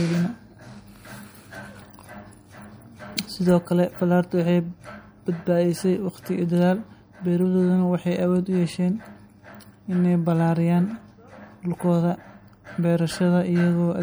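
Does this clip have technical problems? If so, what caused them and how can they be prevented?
Yes. Throughout the speech there is plainly audible swirly, watery colouring, with metallic chirps on s sounds and softened consonant onsets. This is likely MP3 compression: short of bits, the encoder zeroed weak frequency lines, which flicker on and off between frames. The damage fits a rate of about 64 kbps. Unlike a simple low-pass filter, which only dulls the top end, this also leaves frame-to-frame chirping and smeared attacks. To prevent it, keep the audio in a lossless format or encode at a much higher bitrate.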